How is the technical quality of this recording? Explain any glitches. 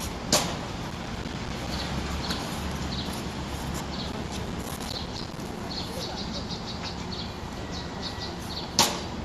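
The recording has two bursts of processor overload crackle, from 0.91 to 1.67 s and again from 4.12 to 5.60 s. In both, the processor couldn't finish each short buffer in time, so dozens of deadlines slipped in a row. Each miss leaves a tiny silent hole of a few milliseconds, cut in with hard edges. Strung together, those holes make a gritty, tearing crackle over the sound that stops when the load eases.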